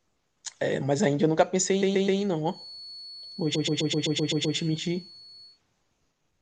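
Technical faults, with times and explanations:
1.81–2.20 s and 3.54–4.56 s, repeated frames: the speech stutters, replaying a 128 ms slice three times, then eight, because compressed frames were duplicated.
2.44–5.61 s, feedback whistle: a thin 4.4 kHz whistle sits well below the speech, likely from a speaker-to-microphone loop hovering just short of runaway feedback.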